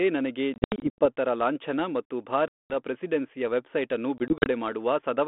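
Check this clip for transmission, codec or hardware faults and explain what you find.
Packet loss on an ADPCM call occurs three times in this speech clip. From 0.54 to 1.06 s, 260 ms goes missing in scattered gaps up to 80 ms long, just before "ಲಾಂಛನ ಮತ್ತು". From 2.48 to 2.74 s, a 220 ms hole precedes "ಪ್ರೆಸಿಡೆನ್ಸಿಯ ವೆಬ್ಸೈಟ್ ಅನ್ನು". From 4.18 to 4.47 s, 100 ms drops out over 280 ms. Each loss is filled with hard-edged silence. The decoder's predictor and step size then disagree with the sender's. So speech resumes slightly and briefly distorted. The light, band-limited ADPCM sound fits 32 kbit/s G.726.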